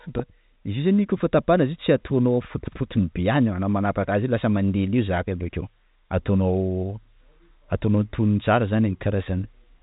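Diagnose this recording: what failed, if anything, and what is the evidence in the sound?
Nothing failed: the speech carries the narrow band of ordinary G.711 telephone coding, with content stopping near 3.8 kHz as that format dictates, and no stage of the chain shows anything to diagnose.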